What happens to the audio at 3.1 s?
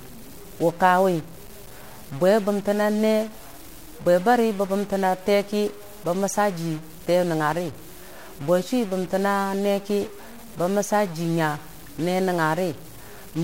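At 3.1 s the speech carries harsh, buzzy distortion present throughout the clip, most likely a stuck bit offsetting about half the samples by a step of about -35 dBFS. The waveform shows small jagged jumps, the spectrogram a broadband haze filling even pauses.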